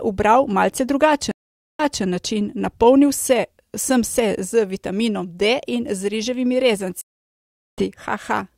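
Speech clip with two stream reconnects. After "ubral malce" the audio cuts out from 1.31 to 2.03 s, with about 480 ms of silence, and resumes 240 ms earlier than it stopped. From 7.01 to 7.85 s, a 765 ms gap resumes at roughly the same point. In each case the connection dropped and a fresh decoder restarted mid-stream.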